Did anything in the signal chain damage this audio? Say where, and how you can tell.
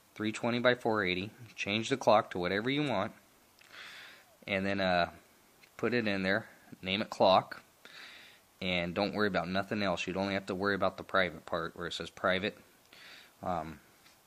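No, no stage in the chain has left any audible damage on this audio. Listening from the first moment to the last, nothing in the sound points to a problem anywhere between capture and playback.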